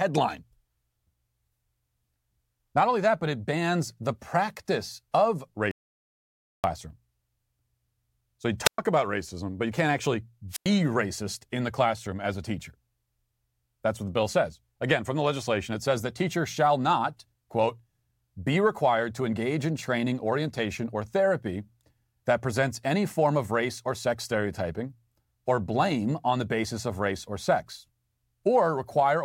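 The input feed was likely lost for a moment, with the recorder writing silence: at 5.71 s, right after "bans the practice of", the speech stops dead into an audio dropout to silence with no room tone, returning at 6.64 s, so about 0.93 s is missing.

At 8.64 s the wireless microphone's radio signal fades until the receiver's squelch shuts the output, a wireless microphone squelch dropout. A burst of hiss gives way to a mute of about 113 ms, and the voice comes back at 8.78 s on "about racism but you". The signal fades and mutes the same way again from 10.50 to 10.69 s, between "but you can't actually" and "racist in the classroom", with a hole of about 96 ms.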